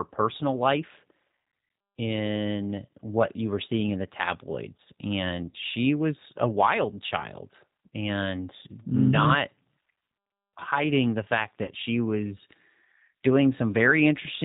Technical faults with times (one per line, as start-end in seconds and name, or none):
0.00-14.44 G.729 codec
5.51-5.56 VoIP packet loss concealed by the speech codec
11.65-11.70 VoIP packet loss concealed by the speech codec